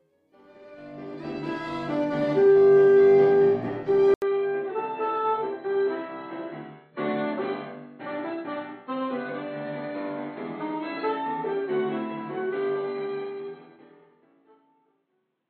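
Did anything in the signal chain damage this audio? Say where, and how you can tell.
Yes. At 4.14 s the audio cuts out for 80 ms, then returns duller and boxier, about 10 dB quieter, with nothing above 4.2 kHz and a faint new noise floor. The likely cause, at the driver stage, is an input switched to a poorer device.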